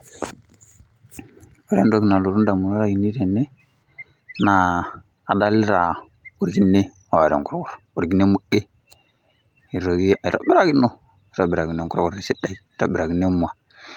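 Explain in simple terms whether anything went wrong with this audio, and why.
Nothing went wrong here: the speech recording carries no technical faults that a listener can hear at any point.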